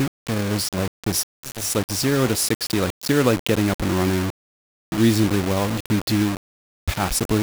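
The speech was likely rounded to only 4 bits without dither, leaving low bit depth without dither throughout. The rounding error tracks the signal at only about 10 dB below it, so quiet sounds turn gritty and grainy, and quiet stretches sputter or drop out.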